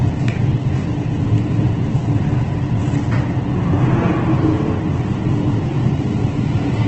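From start to finish the audio sounds grainy and rough, with tonal parts dissolving into a noisy, sandy texture. There's very little of the swirly, hollow character you'd get from MP3, and nothing comes through above about 8.3 kHz, so the whole thing sounds narrowed to wideband. That's likely Opus compression running in its music (CELT) mode, starved of bits. The heavy damage points to a very low rate, somewhere around 12 kbps. At that rate the encoder keeps each band's energy but patches in folded or noise-like content instead of real detail.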